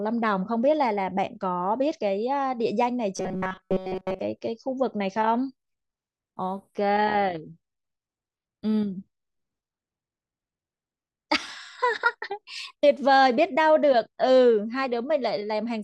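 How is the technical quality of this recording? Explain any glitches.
The recording has one clear glitch in its speech. From 3.17 to 4.19 s it turns into robotic sound from repeated short buffers: a rigid, metallic buzz pitched at about 188 Hz that roughly tracks the talking. The likely cause is new audio arriving too late, so the playback software keeps looping the last fragment, about 5.3 ms long, while the real audio is skipped. Nearly the whole second is looped material, and the constant repeat rate stamps that fixed buzz onto the sound.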